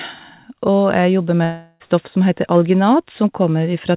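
From 1.44 to 1.82 s the speech gives way to a buzzy, fading continuation, likely a long network dropout: about 360 ms never arrived, and the receiver stretched the last sound across the gap. On a spectrogram, smeared repeating harmonics decay there, all below the 4 kHz call-path ceiling.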